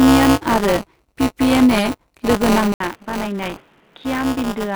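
Speech throughout, carrying a steady robotic buzz at 200 Hz that is present only while sound is present: buffer tearing, where the writing program and the reading hardware have slipped within a ring buffer. Roughly a tenth of each 5 ms period holds audio from about 20 ms earlier, spliced in with hard joins. That suggests a ring of around four periods. On a waveform these show as abrupt steps every 5 ms, and a spectrogram shows vertical striations at that spacing with a 200 Hz harmonic comb over the speech. At 2.72 s the sound breaks off for 80 ms and returns duller and boxier to the end at 4.76 s, most likely an input switched to a poorer device, such as another microphone or a headset call profile. The spectrogram loses its upper band from that point, a new noise floor appears about 30 dB below the speech, and the waveform envelope shrinks by about 5 dB after the gap.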